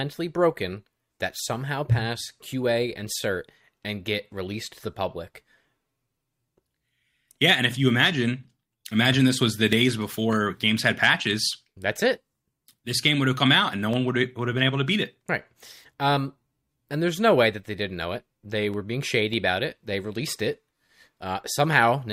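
From 0.13 s to 21.73 s a click recurs every 0.6 s, about forty in all. These are clock drift buffer slips, likely from two devices on separate clocks, the buffer dropping or repeating a block of roughly fifteen samples each time.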